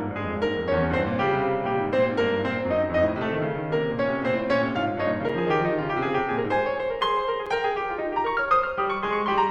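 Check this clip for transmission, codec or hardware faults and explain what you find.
There's one kind of fault here, and it shows up twice in the music. At 5.29 s and 7.46 s there's a block of digital silence, each roughly 5.8 ms long, which fits a 256-sample buffer the program didn't fill in time. The audio drops straight to silence and back with no fade, so each gap comes across as a quick tick rather than a hole.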